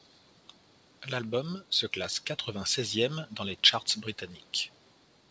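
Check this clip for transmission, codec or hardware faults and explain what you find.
No transmission, codec or hardware faults turn up anywhere in this speech. Nothing is heard above 8 kHz, which fits the normal bandwidth of a wideband call path such as G.722, and the microphone processing's high-pass filter trims the deepest bass as expected.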